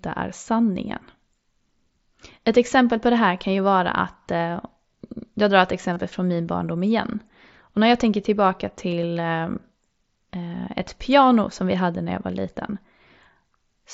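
This speech clip has concealed Bluetooth headset packet loss. Voice packets between headset and phone went missing twice, and the receiver filled each gap by repeating the best-matching recent stretch of waveform. From 5.93 to 5.96 s, after "jag drar ett" and before "från min barndom igen", about 30 ms is bridged this way, leaving a brief buzzy, held tone and a slight warble as real audio resumes. At 8.91 s, after "när jag tänker tillbaka", a shorter 15 ms fill follows. The mSBC wideband link, passing speech up to 8 kHz, is otherwise carrying the audio.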